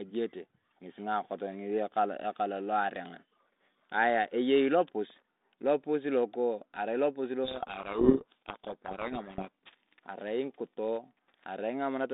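From 7.44 to 9.49 s there's a codec payload misread: the two ends disagree on the bit order inside each G.726 code word, so the decoder unpacks every sample's difference value scrambled. For those two seconds the speech sinks under harsh, grinding distortion. Before and after, the 32 kbit/s G.726 path sounds as expected, narrow telephone band from 200 Hz to 3.7 kHz with only light coding roughness.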